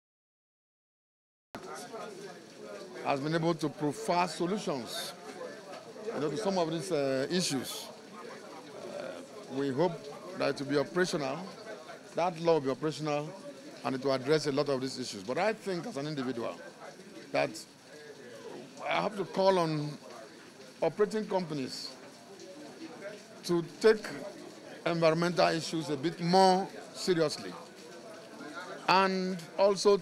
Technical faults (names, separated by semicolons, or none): cut-off start